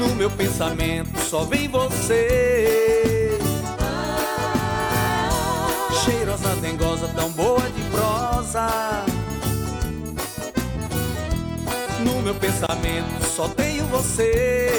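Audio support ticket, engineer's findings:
Brief dropout to silence at 12.67–12.69 s, about 27 ms, edges smeared, sound resumes where it stopped. Gap at a join of encoded pieces: separately encoded segments concatenated untrimmed, encoder start delay plus last-frame padding left in at the splice.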